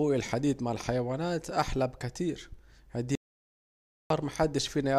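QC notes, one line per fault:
3.15 to 4.10 s, audio dropout to silence: the speech cuts off mid-flow and returns about 0.95 s later. The gap is silent, with no room tone underneath. The input was likely lost while recording continued, so that stretch of speech is gone.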